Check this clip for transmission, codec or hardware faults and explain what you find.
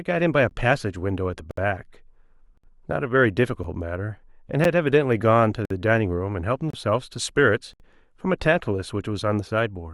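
Yes, there is one recurring fault, a gap between stream segments, in this speech at 0.49, 1.51–1.57, 2.57–2.64, 3.64, 4.64, 5.65–5.71, 6.70–6.73 and 7.73–7.80 s.

Roughly once per second, consecutive one-second segments fail to meet in time, and the player fills the hole with silence lasting between about 8 and 65 ms. The result is hard-edged dropouts. On a waveform they appear as flat zero-line stretches, and on a spectrogram as clean vertical blank stripes.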